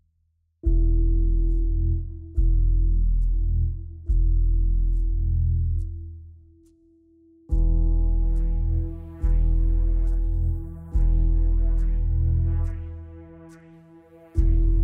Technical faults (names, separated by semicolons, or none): none